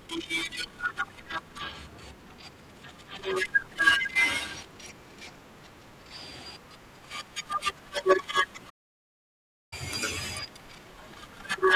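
At 8.69 s the speech cuts out in mid-flow and the output stays silent for about 1.02 s, resuming at 9.73 s. This playback stall is likely the player running out of buffered data, or its thread being blocked, until playback recovered.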